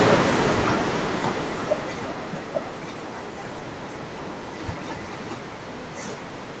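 From 0.05 s the speech starts loud, then sinks steadily along with its background, ending about 15 dB quieter by 2.62 s. This is automatic gain falling: the gain control judged the input too loud or its background noise too strong, and eased its gain down gradually.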